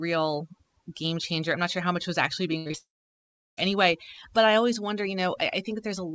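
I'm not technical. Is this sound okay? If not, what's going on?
No. Overdone noise removal runs through the whole clip. A cleanup tool was set too strong, so quiet parts of the speech are removed along with the hiss. The background drops and breaks up into twinkling, warbling specks.

A burst of packet loss comes right after "how much was actually", from 2.58 to 2.68 s. About 80 ms of the call never arrived. The receiver stretched the last sound to fill the hole, letting it fade, so you hear that sound held and fading instead of the missing piece.

Two short concealed packet losses follow immediately, from 2.68 to 2.72 s and from 2.72 to 2.75 s. Each time about 20 ms went missing and was patched with a guess based on the sound just before, which comes across as a quick smear or wobble.

From 2.77 to 3.59 s there is a gap of almost a second, most of it silent, likely a long network dropout. 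The patched sound fades out within a fraction of a second, then nothing plays, and the speech resumes later with that part lost.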